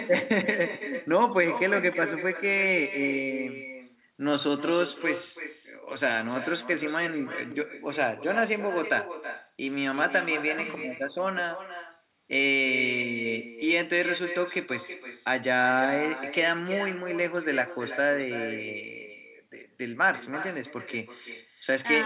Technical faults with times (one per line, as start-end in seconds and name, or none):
0.00-22.06 echo with no canceller
0.40-22.06 DC step